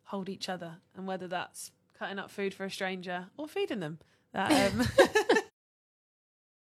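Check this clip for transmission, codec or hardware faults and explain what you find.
No transmission, codec or hardware faults.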